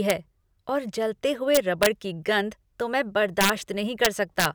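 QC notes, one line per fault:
0.10 s: integer overflow. A peak hits the integer ceiling and wraps to the opposite sign. It gives a brief, sharp crack rather than soft clipping.
1.55 to 1.86 s: integer overflow. Loud peaks driven about 2 dB past the limit flip across the full range. The result is repeated harsh cracks, far sharper than clipping.
3.41 to 3.50 s: integer overflow. Overdrive of about 4 dB wraps the biggest peaks to the other sign. The result is a short burst of violent cracking.
4.05 to 4.45 s: integer overflow. Peaks about 2 dB over the limit wrap instead of being limited. Loud moments break into sharp cracks.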